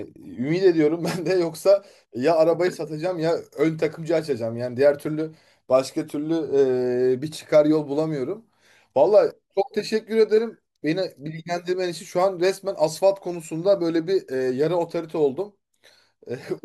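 A speech recording with nothing technically wrong with it.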